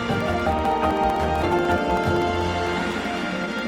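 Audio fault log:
0.08 to 3.59 s, periodic USB or driver dropouts: At a fixed interval, some task stalls the USB bus or the audio driver long enough for the output to run dry, and each stall leaves a gap of silence of roughly 2 ms. They recur every 64 ms, about 70 times in all, so the sound carries a steady train of small ticks, roughly fifteen per second, that are heard only where there is signal to interrupt.
1.43 to 1.45 s, skip ahead: Later audio was already waiting, and the stretch before it was discarded, most likely by a jitter buffer that overflowed and then cut its delay by about 0.7 s to catch up. Playback jumps straight over the missing portion with no silent gap, so roughly 0.7 s of sound simply never plays. The material on either side is butted together, which produces an abrupt discontinuity rather than a pause.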